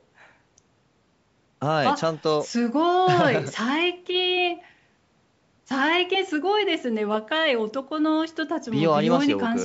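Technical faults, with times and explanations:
No technical faults are audible.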